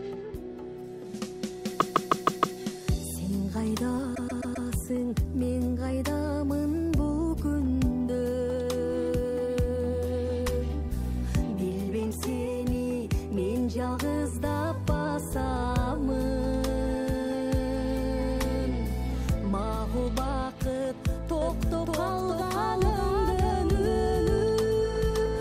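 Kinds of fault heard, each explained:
Repeated frames: A short run of compressed audio is decoded again and again, so the same fragment loops as a stutter and the clip grows by the replayed time. From 1.79 s to 2.58 s a block of about 157 ms plays five extra times, adding about 0.78 s. From 4.14 s to 4.66 s a block of about 131 ms repeats four more times, adding about 0.52 s.
Doubled audio track: A second full-band copy of the sound enters abruptly at 21.42 s and runs to the end. It sits roughly half a second behind the original at about the same level. It has no decay tail or room colouring, so it is not an acoustic echo. Its likely cause is the signal being captured again through a slower path, or an edit leaving two offset copies mixed together.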